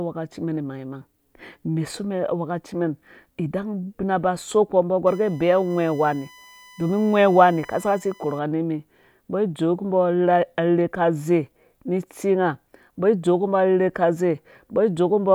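Right after "ba so kpo mbɔ", from 5.07 to 8.39 s, there's USB whine sitting under the speech: a steady, fixed-pitch tone on a 1 kHz base, strongest at 2 kHz, roughly 30 dB down. That's the bus's 1 ms frame current leaking in through power or ground.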